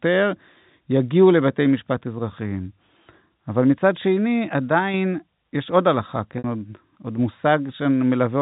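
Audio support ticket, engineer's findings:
Packet loss with pitch repetition at 3.28 s: brief held, buzzy blip, about 20 ms, consistent with a single lost packet. Receiver's concealment repeating the last pitch period to fill it.

Same fault at 6.38 to 6.44 s: 60 ms gap, roughly three packets' worth. Repeated pitch period fades toward silence, then speech cross-fades back in. Network drops. G.711 telephone band holds up through both.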